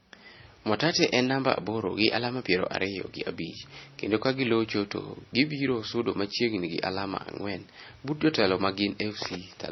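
Speech that was likely encoded to MP3 and then re-encoded as HE-AAC, a case of transcoding between lossy codecs, throughout. Both codecs' artefacts sound together on the MP3's low cut-off, which fits 24 kbit/s MP3 followed by 48 kbit/s HE-AAC.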